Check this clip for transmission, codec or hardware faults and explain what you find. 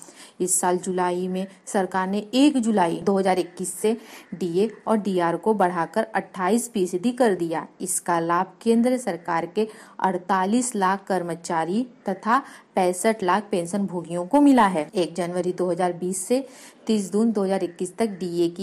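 Nothing stood out on listening to this clip.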